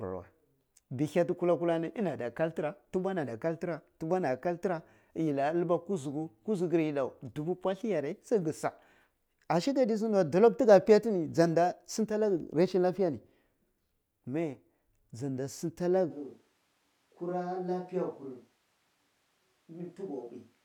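A switch to a distant microphone occurs at 16.12 s and lasts to the end: the speech abruptly turns roomy and hollow, thinner in the bass, roughly 10 dB quieter, with room noise about 35 dB below it, likely because the close microphone dropped out, leaving a farther one.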